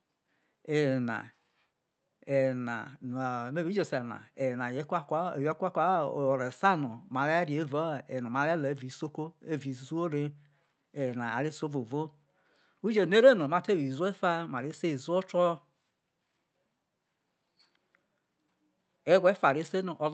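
Speech carried over a call path with clock drift between sender and receiver: the sending clock runs roughly 4 percent fast, so the receiver's jitter buffer keeps overfilling and the receiver has to discard short slices of audio to stay level. Those repeated timing corrections run from 0.01 s to 20.06 s, all removing material, which leaves the sound playing at about 104 percent speed, with small uneven hiccups and a slightly hurried, unsteady tempo throughout. The codec stage keeps its content below 8 kHz.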